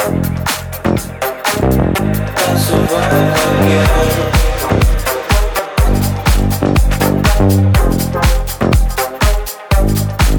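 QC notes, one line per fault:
1.98, 4.69 and 5.59 s: dropped buffer (overrun). There's a sudden skip each time, with no gap. Likely a missed read, losing roughly 70 ms at the first and about 20 ms at the other two.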